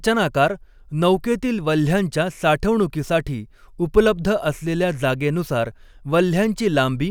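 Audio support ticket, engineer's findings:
Listened to the whole speech recording and found nothing to flag, so no fault to log on this ticket.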